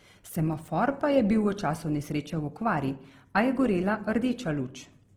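A speech clip with Opus compression damage running from start to finish and plainly audible. The whole signal sounds grainy and rough, with a noisy texture laid over the voiced sound rather than the swirling holes typical of MP3. The likely cause is Opus in its music (CELT) mode starved of bits. The full bandwidth is kept, but bands the bit budget cannot cover are filled with noise or folded-up copies of lower bands. The degree of grain fits a rate around 16 kbps.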